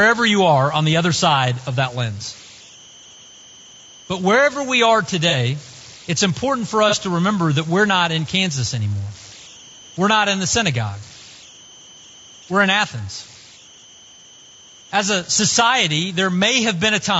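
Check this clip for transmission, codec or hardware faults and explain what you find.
Yes, there's quite a bit going on in this speech clip: a converter problem, some level pumping, obvious low-bitrate codec damage, and two short dropouts.

Converter idle tones run the whole way through. There's a whistle up around 3 kHz, with error sitting only about 25 dB under the speech. You hear it most in the pauses, where the room noise is about 38 dB down and can't cover it. Under quiet syllables it turns to grain. That's a delta-sigma converter without dither getting stuck in repeating bit patterns when the input is small. The tone's pitch follows whatever DC offset it's sitting on.

Gain pumping is there all the way through too. The level ducks by about 5 dB whenever the speech gets loud, so the level keeps breathing and everything sounds squashed together. The likely cause is input gain set far too hot for the mic, with a fast limiter or compressor yanking it back down on every loud peak.

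The low-delay AAC compression is plainly audible throughout. The speech is rough and grainy, there's noise filling the space between the harmonics, and the top end sounds thin and a bit synthetic. That points to AAC-ELD, the low-delay flavour used on video calls. The sound fits something around 32 kbps. Its short frames can't resolve pitch harmonics cleanly and they eat bits, so at a rate like that the voice is the likely casualty.

AAC frame loss with concealment shows up twice, at 5.30 to 5.35 s and again at 6.89 to 6.94 s. Each time about 30 ms of audio went missing. The decoder patched each gap from the last good spectrum, with scrambled signs or interpolated energy, so what you hear is a brief smeared, noisy or phasey blip rather than silence. Both gaps were short enough that it never had to fade out.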